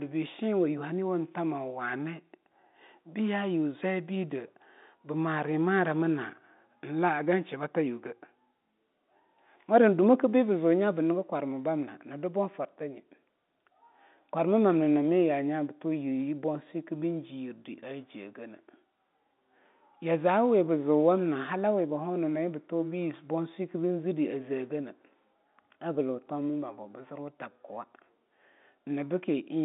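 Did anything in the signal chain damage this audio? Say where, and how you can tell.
No, nothing in the chain damaged this speech: the band sitting between roughly 200 Hz and 3.7 kHz, with nothing above 3.8 kHz, is simply the signature of a G.711 telephone line, which fits an ordinary 64 kbps mu-law call path.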